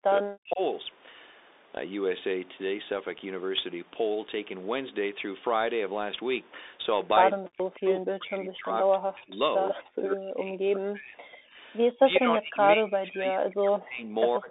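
Throughout, the Bluetooth CVSD headset codec limits the band: nothing sits above 3.8 kHz. Its one-bit, step-adapting coding, which fits a 64 kbps link, adds plainly audible granular hiss and scratchy sibilants. A spectrogram shows a hard ceiling with speckled noise beneath it.

From 0.0 to 0.6 s, 7.34 to 9.39 s and 9.71 to 11.18 s, the speech is suppressed in double talk. The echo canceller likely mistook the talker for loudspeaker echo during overlap and pulled the level down by about 30 to 40 dB. The waveform shows deep carved-out troughs.

At 11.32 s, a 60 ms echo leak lets through a faint copy of the speech 140 ms late, about 30 dB below it. This is likely residual echo the canceller missed. It shows as a weak, smeared ghost trace on the spectrogram.

Suppression returns at 11.41 to 11.57 s, 11.96 to 14.17 s and 14.37 s to the end. Each time the sound dips or thins while the other side speaks.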